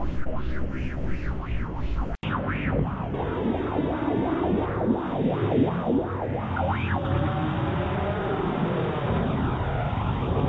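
Between 0.24 and 0.27 s there is a brief smear or wobble in the sound, where the audio seems to carry on by itself for a moment before settling back. This is short concealed packet loss: about 20 ms of the call arrived too late for the decoder, and the receiver extended the preceding sound, following its pitch or as shaped noise, for around 13 ms before blending back into the real audio.

At 2.15 s the audio drops out for 80 ms, then returns duller and boxier. It stays that way to the end of the clip. Before the switch the sound reaches up to 8 kHz, the ceiling of the G.722 call path. Afterwards nothing is present above 3.8 kHz, and a new background noise sits roughly 50 dB below the signal, with the overall level about the same. The likely cause is the input switching to a poorer device, such as another microphone or a headset's call profile, which passes a narrower band and brings its own noise.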